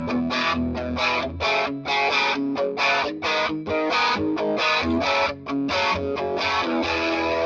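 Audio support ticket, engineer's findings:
Noise suppressor misclassified the sound as noise, 5.33–5.49 s: gain pulled down on it for roughly 150 ms, deepest cut about 7 dB, so the sound dips in level there. Call mic processing band-limits to 8 kHz, as expected.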